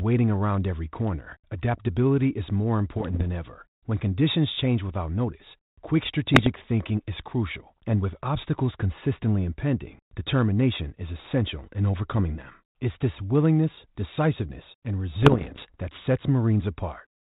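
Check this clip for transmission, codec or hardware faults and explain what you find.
There's one fault here, bit errors on an ADPCM link, hitting the speech three times: 2.96 to 3.23 s, 6.34 to 6.51 s, and 15.22 to 15.65 s, the last being the worst, with errors around one or two percent. A flipped bit throws off the decoder's step size and predictor, so each error rings on briefly. You hear pops and rough bursts with short level jumps. The underlying band-limited G.726 coding, which fits 32 kbit/s, is carried through it.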